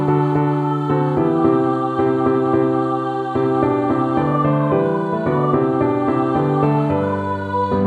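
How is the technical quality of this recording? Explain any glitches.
No glitches turn up anywhere in the recording; its level, continuity and timing hold steady throughout, with no dropouts, clicks or other technical disturbances to explain.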